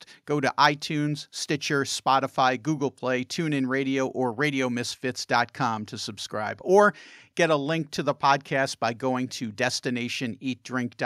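No technical faults can be heard anywhere in the speech recording, and the signal stays steady and intact throughout.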